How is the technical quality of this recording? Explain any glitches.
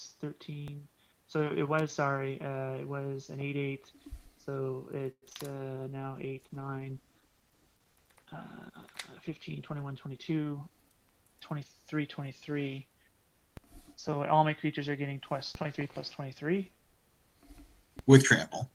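The recording has several glitches. They are a series of DC steps, one burst of crackle, a cluster of call transmission faults around 5 s, a long stretch of reduced quality, and a brief rush.

DC steps occur at 0.68, 13.57, 15.55 and 17.99 s. Each time the waveform's zero line jumps suddenly. A 2 Hz high-pass then lets the offset drain away. Each step is heard as a low thump or click. The sound itself carries on unaffected.

Loose connector crackle runs from 1.79 to 1.88 s. A poor contact makes and breaks many times in under a tenth of a second. This chops the signal. The result is a short, irregular scratchy crackle.

A call audio freeze lasts from 5.11 to 5.24 s. The receiver ran out of audio, likely because delayed packets emptied its jitter buffer. It stretched the last sound for 106 ms, ending in about 50 ms of silence. The audio then resumes where it stopped, about 0.1 s late.

Short concealed packet loss follows at 5.30 s and again from 5.33 to 5.49 s. 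Each time about 20 ms of audio never arrived. The receiver extended the preceding sound and blended back into the real signal. This is heard as brief smears or wobbles.

A call bitrate drop spans 5.92 to 11.44 s. The encoder was pushed from 40 to 15 kbps and held at the lowest rate for about 4 s. Coarser coding makes the sound rough and watery. The highs become dull until quality recovers.

A jitter buffer speed-up runs from 10.06 to 10.89 s. Playback moves at 110% speed with the pitch unchanged. The receiver removed short pitch-period slices, about a tenth of a second in total, to cut the built-up delay. The passage sounds hurried.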